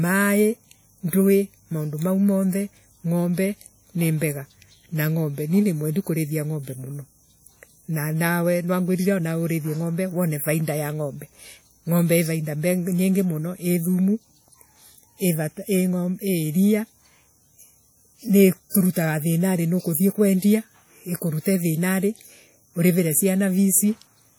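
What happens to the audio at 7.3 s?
As throughout the clip, the speech at 7.3 s rings and sounds washy, with hiss breathing alongside it. This is likely WMA compression smearing quantisation noise across long transform blocks, consistent with roughly 48 kbps.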